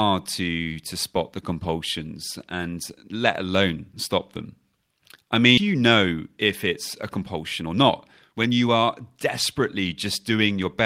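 At 5.57 s there is a skip ahead: about a second of speech never plays, and the sound before and after is butted together with no audible gap. That stretch was dropped while later audio was already queued, so the delay drops by roughly a second at once. On a waveform the envelope changes abruptly at the splice, and a spectrogram shows harmonics and formants that don't line up across it.

Jitter buffer speed-up follows, as the receiver works off its excess delay by cutting out short pitch-period pieces again and again. From 5.67 to 7.91 s the speech runs about 12% fast, losing roughly 300 ms. From 8.31 to 9.11 s it runs about 18% fast, losing around 150 ms. From 10.31 to 10.82 s it runs about 8% fast, losing around 50 ms. Pitch stays unchanged, but syllables sound hurried. A spectrogram shows compressed syllable timing with harmonics at their normal spacing, and a waveform shows voiced cycles of normal length, with fewer of them per syllable.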